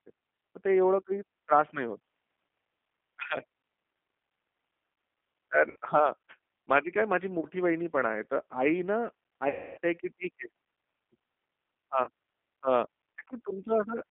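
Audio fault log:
throughout: G.729 codec. The speech sits in a narrow telephone band of roughly 250 Hz to 3.4 kHz, with a plainly rough, synthetic grain, which fits an 8 kbit/s G.729A coder rebuilding each frame from a vocal tract filter and a few pulses. Unlike simple band-limiting, the voice texture itself is damaged.
5.71–5.76, 7.40–7.46, 9.49–9.78, 12.04–12.09: VoIP packet loss concealed by the speech codec. Gaps of about 50, 30, 280 and 30 ms are filled with stretched, buzzy or noisy sound that fades, as the decoder repeats its last pitch and filter at falling gain. Unlike a dropout, there is no clean silence, and the longest gap fades furthest.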